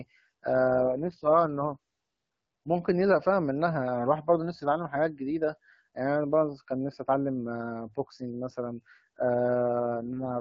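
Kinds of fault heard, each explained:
AMR rate drop: the HD Voice coder steps down to a much lower rate, from 0.68 to 1.77 s and again from 9.78 s to the end, so speech turns rough and synthetic without any gap or narrowing, consistent with dropping from 12.65 to 6.6 kbit/s.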